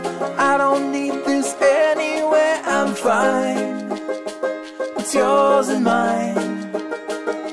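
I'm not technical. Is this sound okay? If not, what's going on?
Yes, nothing wrong can be heard anywhere in this music.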